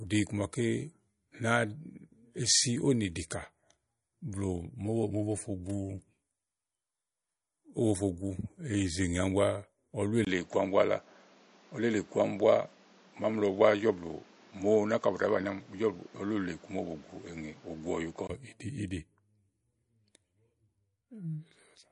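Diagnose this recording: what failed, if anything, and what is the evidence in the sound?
The codec stage failed. The whole recording carries plainly audible MP3 compression damage. Nothing survives above 10.6 kHz, where the encoder cut the treble to save bits. Weak frequency lines drop in and out between frames, so the speech sounds watery and swirly. Sibilants chirp and consonant attacks smear. That much damage points to a low bitrate, around 40 kbps. The likely cause is an encoder starved of bits.

The input stage changed mid-recording. At 10.25 s the speech breaks for about 20 ms. It then turns duller and boxier, with nothing above 7.7 kHz. A new noise floor appears, roughly 30 dB below the speech. The loudness stays much the same. At 18.29 s the wider band returns. This is likely an input switched to a poorer device, a narrower-band microphone or headset path, and then back again.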